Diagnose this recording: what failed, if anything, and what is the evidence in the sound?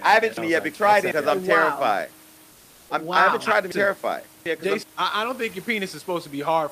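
Chunks out of order, at the buffer or network stage: around 0.37–1.12 s and 3.72–4.83 s, 0.37 s blocks play one and then two slots late, giving jumbled jumps.

Comfort noise in place of the background, at the codec: from 2.51 to 2.89 s the real background goes flat and featureless at the same level, likely Opus DTX filling the pause.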